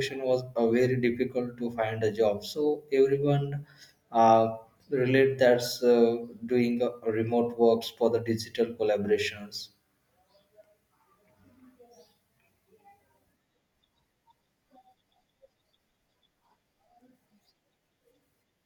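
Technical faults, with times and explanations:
No technical faults are audible in this speech recording.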